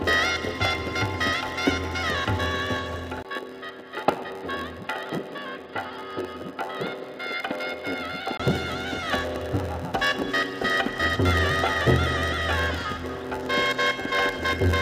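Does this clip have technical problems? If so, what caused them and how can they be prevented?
Yes. Throughout, there's a block size mismatch (padded): one stage writes short blocks and pads them with zeros, so a 91.9 Hz buzz sits underneath and everything runs at 0.919× speed with its timbre intact. Matching the block sizes at both ends of that hand-off fixes it.

From 3.23 to 8.40 s the sound goes dull and a bit quieter, with a narrower band and a faint new noise floor, with a 20 ms silence at the switch, likely the input switched to a poorer device. Pin the input device so the system can't change it mid-recording.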